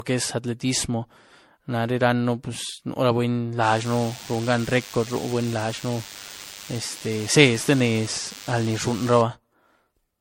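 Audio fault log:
Throughout: generation loss. Swirly, smeared, hollow sound with blurred attacks and nothing above 16.5 kHz, likely from repeated MP3 re-encoding at 64 kbit/s, about seven passes.
3.63 to 9.21 s: DECT cordless phone buzz. Steady thin buzz at 100 Hz with many harmonics, about 20 dB below the speech, from rectified radio bursts every 10 ms.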